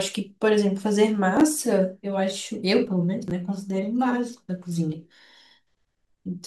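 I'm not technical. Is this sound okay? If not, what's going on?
No. The speech has two brief glitches called chunks out of order, at about 1.37 to 1.41 s and 3.28 to 3.31 s. Audio travels in small pieces, here about 10 ms each. In both spots one piece came through late and played three pieces behind its place the first time and two pieces behind the second time. Nothing is missing, but the shuffled order leaves three abrupt joins, heard as a tiny scrambled blip.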